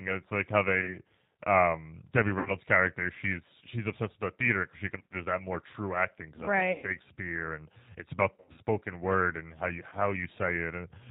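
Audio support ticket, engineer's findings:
Rough, slightly synthetic speech throughout, band-limited with nothing above 4 kHz. G.729 codec at 8 kbit/s, pointing to the G.729A variant. Speech is rebuilt from a vocal tract filter, a pitch predictor and sparse pulses per 10 ms frame, so fine detail and natural texture are lost.

Buzzy, stretched tone fading out, then weak, distorted speech for a moment after it resumes: 0.81–0.98, 2.39–2.52, 4.97–5.15, 6.72–6.85, 8.35–8.58 and 9.90–9.95 s. Diagnosis is VoIP packet loss concealed by the speech codec. The decoder extends the last pitch and filter at falling gain, and frame-to-frame dependence delays recovery.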